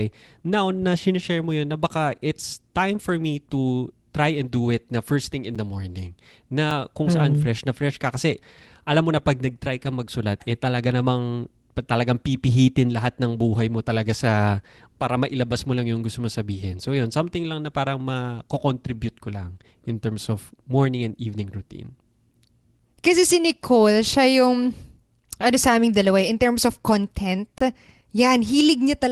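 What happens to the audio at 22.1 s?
Nothing goes wrong at 22.1 s: the speech carries on intact through that moment, with only the steady upper limit near 12 kHz that the call codec places on the whole path.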